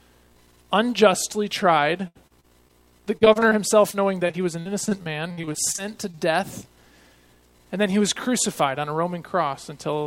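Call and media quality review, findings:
Choppy, robotic sound with pieces missing, 2.07–2.71 s, 3.17–3.53 s and 3.91–6.19 s. Repeated packet loss (robotic sound) in the jitter buffer or network path. Holes up to 76 ms are patched by extending prior audio, about 16–30% of each stretch.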